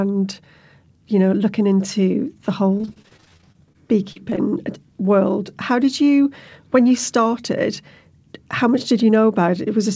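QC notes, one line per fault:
2.78–3.76 s, repeated packet loss (robotic sound): right after "know looking into the", gaps up to 27 ms keep recurring and get patched, so about a quarter turns choppy, not one blip.
4.12–4.17, 4.30–4.34 and 4.36–4.39 s, short concealed packet loss: isolated 20–40 ms holes filled by extending the previous sound, heard as brief smears or wobbles rather than sustained robotic texture.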